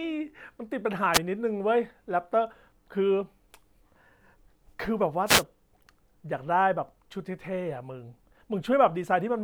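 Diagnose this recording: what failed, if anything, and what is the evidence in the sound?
The failure is on the analogue side, in the radio link of a wireless microphone, and shows as two wireless microphone noise hits: a brief one at 1.13 to 1.19 s and a longer one at 5.26 to 5.43 s, each a short swish or burst of static. As the FM signal fades through multipath cancellation, receiver noise rises over the speech. Unlike a network dropout or codec concealment, these gaps fill with hiss instead of silence or smeared repeats.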